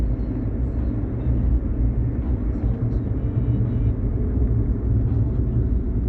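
Nothing stood out on listening to this audio, which came through a call connection with its Opus coding audible as its usual coding noise and the expected narrowing of the top end.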